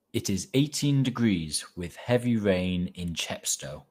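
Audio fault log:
Nothing stood out on listening to the speech in this recording.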